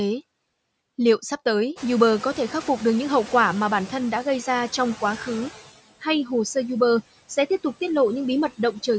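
Throughout this speech clip, noise suppressor artifacts are audible. The background is pulled down by about 21 dB, frame by frame, across the bands the processor judges to be steady noise. Because the reduction varies from frame to frame, the residue sinks in the gaps and swells back under the speech. The room noise, which belongs to the recording, jumps by about 21 dB at around 2 s and then sits about 18 dB below the speech. From 1.75 to 4.0 s the noise suppressor is catching up: its noise estimate still reflects the quieter conditions, so the louder background passes with only about 5 dB of reduction at first, then sinks over roughly 2.25 s as the estimate adapts. From 4.89 to 6.47 s a GSM phone buzz cuts in, a hard, raspy tone at about 217 Hz with a dense ladder of harmonics, roughly 21 dB below the speech and unrelated to it. This is a nearby 2G handset transmitting in bursts 217 times a second, with the audio circuitry rectifying those radio pulses. 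The buzz is nearly steady, which points to the phone being in a call rather than a data transfer. The band stops at 8 kHz, consistent with call microphone processing.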